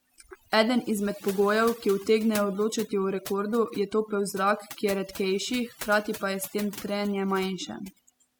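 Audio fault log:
throughout, overdone noise removal: the speech has been run through noise reduction set far too aggressively. Individual frequency bands are pulled down hard or muted whenever their level sits close to the tool's noise estimate, so the background drops and breaks up into twinkling, chirpy specks. Softer components of the voice fall under that threshold too and are stripped out along with the noise.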